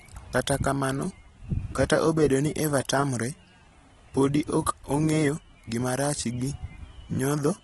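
AAC compression runs throughout the speech, and the damage is plainly audible. Nothing is heard above 11.9 kHz, so the top end is missing and the sound is dull. The smeared, warbling texture on sustained sounds and the fizz on sibilants are likely the work of a low-bitrate AAC-LC encoder, one that fits roughly 28 kbps. It quantises each frame's spectrum coarsely, lowering the cut-off and thinning or noise-filling the upper bands.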